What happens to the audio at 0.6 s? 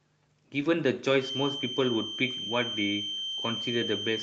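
From 0.59 to 0.65 s there is a lost packet rebuilt from error correction: about 40 ms of speech, which fits two lost 20 ms packets, is played from the low-bitrate copies carried in the following packets. There is no gap, but that stretch sounds rougher and noisier.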